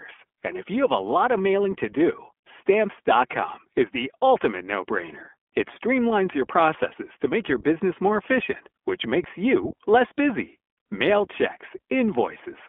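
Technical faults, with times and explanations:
Throughout, iLBC codec: the speech is confined to a telephone band of roughly 250 Hz to 3.4 kHz, with nothing above 4 kHz, and the coding damage is plainly audible as a rough, synthetic edge. Each 20 ms frame's excitation is rebuilt on its own, without reference to the previous frame, which fits the 15.2 kbps mode. That frame-by-frame texture, rather than bandwidth loss alone, separates it from a simple low-pass filter or plain telephone-line limiting.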